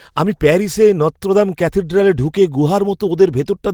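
No technical faults are audible in this recording.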